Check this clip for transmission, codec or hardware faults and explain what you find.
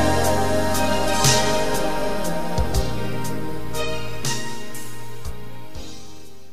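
Nothing stood out on listening to the clip.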